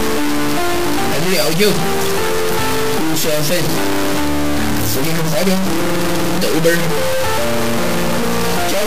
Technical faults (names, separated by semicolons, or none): low bit depth without dither